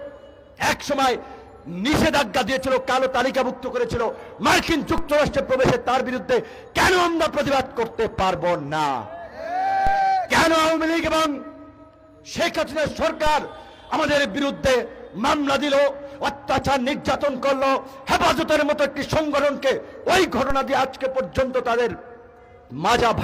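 At 4.98 s, 9.87 s, 13.27 s and 20.50 s the waveform's zero line jumps abruptly, a DC step each time. The first two steps are about -14 dBFS and the last two about -15 dBFS. Each offset then drains away through what behaves like a 5 Hz high-pass. Each step lands as a brief low thump, while the sound itself continues unchanged.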